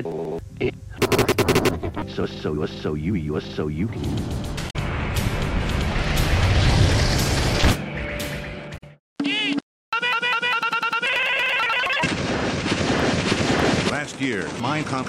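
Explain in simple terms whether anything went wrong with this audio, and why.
Part of the compressed audio data was corrupted in two places, which is damaged data in a compressed stream. The decoder misreads those bits and loses its place, so the sound briefly garbles into a short blip, at 4.66 to 4.76 s and again at 8.74 to 8.83 s.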